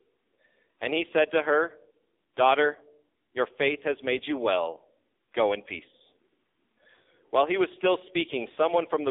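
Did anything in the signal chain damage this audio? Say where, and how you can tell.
Yes. The damage sits at the codec stage and runs through the whole clip: this is the AMR narrowband mobile codec. The speech is confined to roughly 300 Hz to 3.7 kHz, with nothing above, and the voice has a heavy buzzy, synthetic quality from the vocal-tract model being driven by sparse pulses. That degree of roughness points to a low AMR-NB mode, around 5.9 kbps. A plain telephone band-pass filter would narrow the band the same way but leave the voice's natural texture intact.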